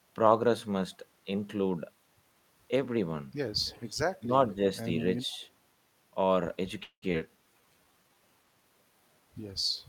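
The first thing you'll catch is an echo leak at 3.65 to 3.92 s. A faint copy of the speech trails the original by 148 ms, sitting about 25 dB under it. The likely cause is the far end running on a loudspeaker with its echo canceller failing to scrub out what its mic picked up, so our own audio got sent back to us. The same 148 ms echo comes back twice more, at 5.3 to 5.44 s (about 35 dB down) and very briefly at 9.76 to 9.81 s (about 40 dB down). The constant delay is what ties all three to the same echo path.

Between those, at 4.19 to 4.31 s, there's speech suppressed in double talk. For roughly a tenth of a second the speech dips, bottoming out about 15 dB down, so it sounds like it briefly ducks away. What likely happened is that both ends were talking at once, and the canceller, unable to tell its near talker from the returning echo, just turned everything down.

At 6.83 to 7.04 s there's a call audio freeze. 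The sound stalls and the last bit gets stretched into a fading fill for 188 ms, with about 80 ms of that going fully silent before the speech resumes exactly where it left off. Nothing is lost, but the stall adds 188 ms of delay. The likely cause is packets arriving late and the jitter buffer running dry.

Straight after, at 7.12 to 7.15 s, comes a skip ahead. Roughly a tenth of a second of audio is simply gone, with only an 11 ms join bridging the two sides, so the speech lurches forward. A stretch got dropped while later audio was already queued, which claws back about 100 ms of that delay.

Finally, from 7.54 to 8.15 s, there's a jitter buffer slow-down. The receiver padded in 111 ms by repeating tiny pitch-period slices, so the speech plays at about 83% speed without any pitch change. It sounds drawn out and slightly sluggish while the buffer rebuilds its cushion.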